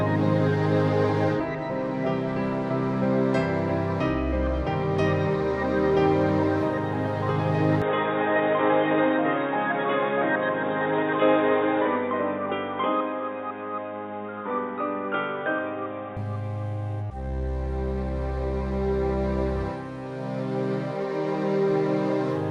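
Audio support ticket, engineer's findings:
Sound turns dull 7.82–16.17 s, nothing above 3.8 kHz, new noise about 30 dB down. Level steady, no gap. Likely input switched to a poorer device.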